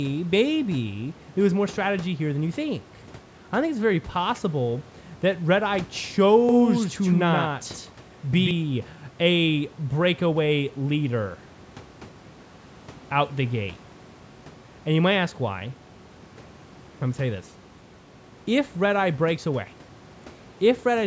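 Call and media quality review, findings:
Doubled audio track, 6.49 to 8.51 s: speech echoed by a full-band copy about 150 ms late and roughly 5 dB quieter, no decay or room colour, switching on and off abruptly. Likely a second capture path or misaligned edit. Waveform shows repeated envelopes offset by about 150 ms; spectrogram shows duplicated harmonic patterns shifted right, cut off identically at 8 kHz.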